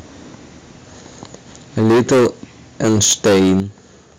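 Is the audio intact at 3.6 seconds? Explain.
No. Microphone overload runs from 2.83 to 3.6 s. Peaks exceed the converter's limit by about 13 dB, most likely from excessive input gain. Roughly a fifth of samples are clipped flat, adding harsh crackle. At 3.6 s, the microphone volume is stepped down. Voice and background drop suddenly by 8 dB, likely the call software cutting input gain after the distortion.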